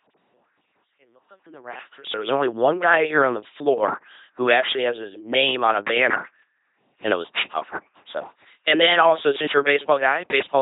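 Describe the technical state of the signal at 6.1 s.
At 6.1 s, as throughout the clip, the speech carries LPC-10 vocoder damage: 2.4 kbit/s pulse-or-noise excitation, nothing above 3.8 kHz, giving a buzzy robotic voice rather than warbly codec artefacts.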